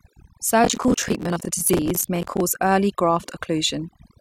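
Overdone noise removal runs through the whole clip. The noise reduction was set far too strong. It pushes frequency bands down or out wherever they sit near the noise estimate. Quiet parts of the speech vanish with them. The background drops and breaks up into twinkling specks.

From 0.64 to 2.40 s, processor overload crackle rides on the speech. The processor kept missing its buffer deadlines, about 70 times over that stretch. Each miss replays a scrap of old audio with hard edges, which fits buffers of around 10 ms. Together they form a gritty, tearing crackle.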